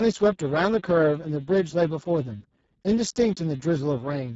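From start to finish the speech carries heavy Speex codec damage. With so few bits left for the CELP excitation, the voiced sound comes out hoarse, noisy and edging toward robotic, which points to Speex at a very low bitrate, roughly 6 kbps. Nothing is present above 7.7 kHz, and the band from 4 kHz up to that edge is only a shaped, hissy fill rather than real detail.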